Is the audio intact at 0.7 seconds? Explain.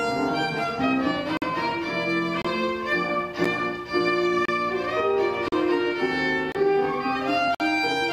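Yes, the audio is intact at 0.7 seconds, with no fault at that moment.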